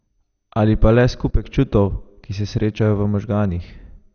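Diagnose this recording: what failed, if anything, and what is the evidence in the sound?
Dull speech with nothing above 6.5 kHz and a gurgling, granular roughness throughout. The fault is at the codec stage, likely MP2 compression at a rate near 48 kbps. Starved of bits, the encoder switches off upper sub-bands and coarsely quantises the remainder.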